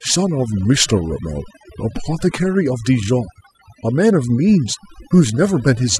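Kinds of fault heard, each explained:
Overdone noise removal: the background between phrases drops and breaks up into twinkling specks. Noise reduction pushed too hard shuts off frequency bands it mistakes for noise, taking quieter parts of the speech with them.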